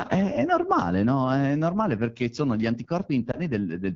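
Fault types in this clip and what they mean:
AMR wideband (HD Voice) codec: The speech is coded up to 6.4 kHz from a pulse-excited vocal tract model, with shaped noise filling the band to 7 kHz. The damage is plainly audible. The speech sounds rough and raspy throughout, which fits a low mode near 8.85 kbit/s.
Lost AMR speech frames: A radio error made a frame fail its check, so the decoder repeated the previous pitch and vocal tract settings at reduced gain. From 3.32 to 3.39 s there is a brief dip or warble, consistent with one lost 20 ms frame.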